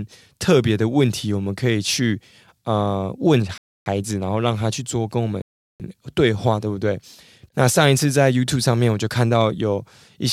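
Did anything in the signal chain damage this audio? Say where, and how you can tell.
Yes: two Bluetooth stalls, at 3.58 to 3.86 s and 5.42 to 5.80 s, where the speech cuts to silence for 0.28 s and 0.38 s and then resumes. At the wireless playback stage, interference likely delayed packets, so the headphones' buffer ran dry until retransmissions arrived.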